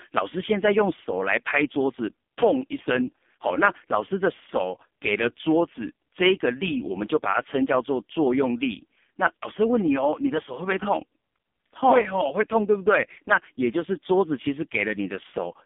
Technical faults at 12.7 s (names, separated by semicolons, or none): AMR narrowband mobile codec